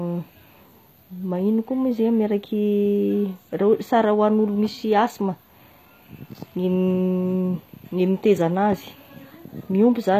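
Throughout the speech, the treble sounds synthetic and s sounds turn gritty and lispy. This is likely HE-AAC compression, rebuilding high frequencies at a low bitrate, near 24 kbps.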